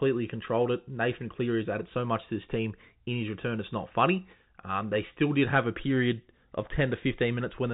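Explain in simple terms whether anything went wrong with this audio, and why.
Nothing went wrong; this is normal telephone-quality sound.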